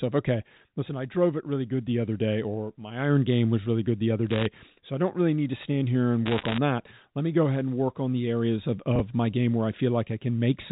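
From 4.30 to 4.46 s, between "really good the other" and "so I don't really", bit errors on the digital phone line scatter sharp ticks over the speech. Each flipped bit corrupts a single sample in the mu-law stream. Hits on the sign or upper bits jump that sample far from its neighbours, which appears as isolated needle spikes in the waveform and thin vertical lines across the spectrogram, reaching the 4 kHz telephone ceiling. A second, denser burst runs from 6.26 to 6.58 s after "to stand here and". With an error rate around one or two percent, the ticks there merge into a gritty crackle.

Around 8.96 to 9.00 s, after "on the areas of" and before "my game where I", a 10 ms chunk of audio is out of order. It plays three chunks (about 30 ms) later than it should. Nothing is lost, but the sound briefly jumbles, with three hard joins. In the waveform these show as abrupt discontinuities, and in the spectrogram as short broadband vertical streaks that break the harmonic stripes.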